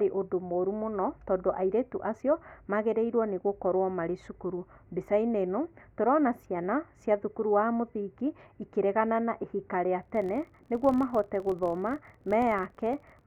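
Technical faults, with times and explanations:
10.03–13.27 s, filter restarted on every block: after "ikĩregana na ihika rĩa" the speech carries a level-following buzz at about 43 Hz, which fits a 1024-sample block. Unlike random clicks, the ticks are evenly spaced.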